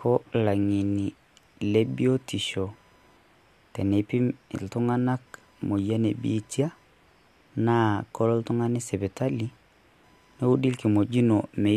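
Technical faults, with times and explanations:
Throughout, computer activity noise: a faint buzzing chirp pulsing at around 1 kHz, roughly 45 dB below the speech. Load swings in the computer's processor, graphics card or mouse disturb the audio circuit's shared ground, so the noise follows machine activity, not the speech.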